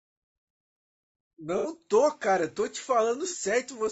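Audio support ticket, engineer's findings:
Low-delay AAC compression, throughout: rough, grainy speech with noise between harmonics. Likely AAC-ELD at a low bitrate around 32 kbps; short frames resolve pitch poorly.

AAC frame loss with concealment, 1.58–1.67 s and 3.29–3.34 s: smeared, noisy patches where the decoder fills gaps from the last good spectrum, consistent with about two frames, then one.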